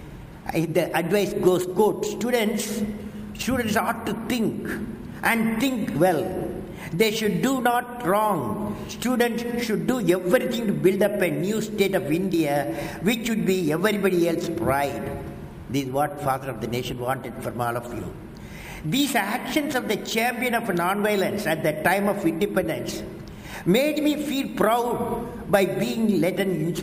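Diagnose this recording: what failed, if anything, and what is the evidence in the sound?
The failure is in sample-rate conversion: imaging from sample-and-hold upsampling, present throughout. A bright, metallic fizz rides on top of the sound, rising and falling with its level, and its lowest band sits between about 11 kHz and 22 kHz at roughly 23 dB below the signal, moving opposite to the pitch. This fits a doubling from about 22 kHz to 44.1 kHz done by repeating each sample without an interpolation filter, leaving mirrored copies of the spectrum above the old band.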